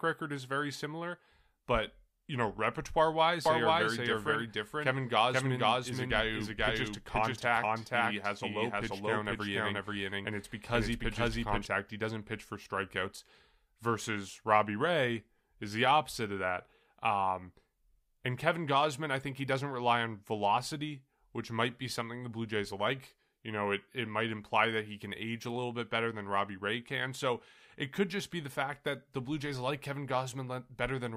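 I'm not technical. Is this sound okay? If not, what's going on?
No. From 3.46 to 11.66 seconds, something in the recording chain was likely feeding the same speech in twice, with one copy running through a slower route or two copies left out of step in an edit. This is called a doubled audio track. You hear the speech plus a second, roughly equally loud copy trailing about half a second behind, clean and without any room echo, and it switches on and off suddenly at those times.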